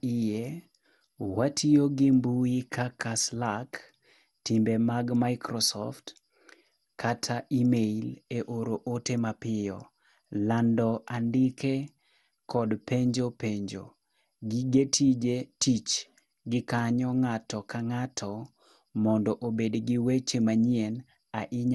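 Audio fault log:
Throughout, generation loss: the speech sounds swirly, smeared and hollow beyond what a 96 kbit/s MP2 encode alone would give, with blurred consonant attacks and nothing above 11.9 kHz, likely from about ten successive decode–re-encode passes whose shifting frame grids compound quantisation noise, unlike a single low-bitrate encode.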